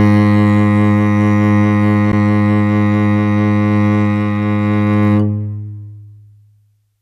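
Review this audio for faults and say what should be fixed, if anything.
There's a gap at a join of encoded pieces in the music at about 2.12 s, a dropout of roughly 11 ms where the sound briefly falls silent and then picks up right where it left off. The edges are smeared by the codec. It points to segments that were encoded separately and butted together, with each one's start-up delay and last-frame padding left in, and the spacing suggests 6-second pieces. To prevent it, trim encoder delay and padding at every join, or encode the whole stream in one pass.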